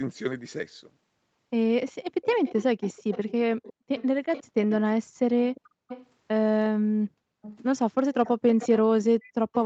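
Speech clip with an echo leak: a quieter copy of the voice, about 15 dB down (about 20 dB at 7.42 to 7.56 s) and trailing by 354 ms, shows up at 1.87 to 3.32 s, 3.63 to 4.74 s, 5.55 to 6.07 s, 7.42 to 7.56 s and 8.25 s to the end, likely from a far-end loudspeaker whose echo canceller let some through. There's also background gated by the echo canceller, where the room sound ducks by about 40 dB for roughly a fifth of a second at 5.69 s and about half a second from 6.81 to 7.42 s before coming back.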